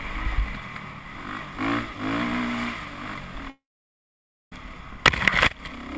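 The audio is cut by a long network dropout from 3.50 s to 4.53 s, most likely caused by packets that never arrived. The receiver stretches the last sound into a brief fading buzz. Then about 0.91 s of near silence follows. When the audio returns at 4.53 s, roughly 1.02 s of material is simply gone. Throughout, nothing sounds above 8 kHz, which fits a wideband call codec such as G.722.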